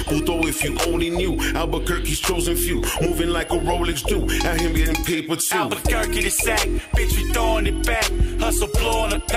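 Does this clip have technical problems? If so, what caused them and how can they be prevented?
No technical problems are audible.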